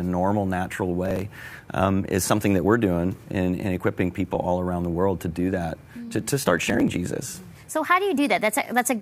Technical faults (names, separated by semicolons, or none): processor overload crackle